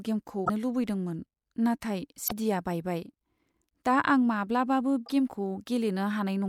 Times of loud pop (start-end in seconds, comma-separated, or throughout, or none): none